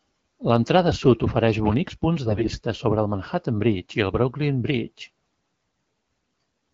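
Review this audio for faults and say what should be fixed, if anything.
Between 2.26 and 2.59 s, after "sud ofereix bonics punts" and before "sobre el", the speech turns hoarse and gargly: AMR bit errors. Around one bit in ten of the weakly protected AMR-WB data arrived corrupted, which fits about sixteen 20 ms frames. The excitation pulses land in the wrong places and the fine pitch, gain and spectral values drift, so level and rough pitch hold while the texture breaks up. On a spectrogram the harmonics smear into noisy, blotchy energy below 6.4 kHz. The waveform keeps its envelope but looks ragged. Light coding softness from the 12.65 kbit/s wideband codec sits under all of it. Stronger channel protection or discarding corrupted frames and concealing them instead would prevent this.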